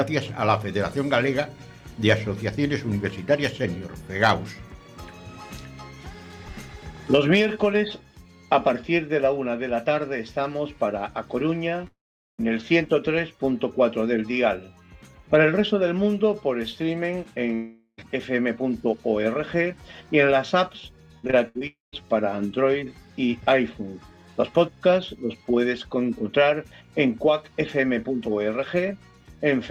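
From 11.87 to 12.40 s the sound turns into a fading buzz that sinks into about 0.42 s of silence before resuming with a piece missing. This is likely a long network dropout: audio stopped arriving for about 0.52 s, and the receiver stretched the last sound until it gave out.

From 17.54 to 18.01 s the same fading continuation appears, this time going silent only briefly, for about 60 ms. The likely cause is another long network dropout, with roughly 0.44 s of audio lost and never played.

Between 21.18 and 21.63 s the sound becomes choppy, broken by several short holes, the longest about 63 ms. This is repeated packet loss (robotic sound). Packets kept going missing, and each hole was patched by extending the previous sound, so about 37% of that stretch is filler.

Right after, from 21.67 to 21.94 s, the audio fades to a buzz and then about 0.16 s of silence. This is likely a further long network dropout that dropped about 0.26 s of audio.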